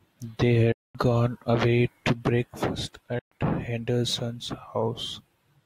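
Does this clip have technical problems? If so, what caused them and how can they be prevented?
Yes. The speech cuts out to silence from 0.72 to 0.95 s and again from 3.19 to 3.32 s, and each time it comes back further along, so about 0.22 s and 0.12 s of sound are missing rather than delayed. That skip, not a pause, marks a likely Bluetooth dropout, where wireless packets arrive too late for the headphones and are discarded. Keeping the phone close, with a clear line of sight and less 2.4 GHz interference, prevents it.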